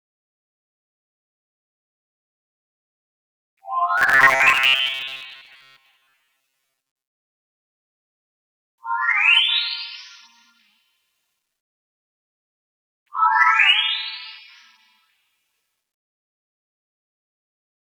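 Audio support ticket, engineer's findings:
Robotic sound from repeated short buffers, 3.98 to 7.88 s. Rigid metallic buzz near 134 Hz over the sound, repeats filling most of that stretch. Likely cause: starved playback buffer looping its last chunk, period pointing to roughly 7.5 ms blocks.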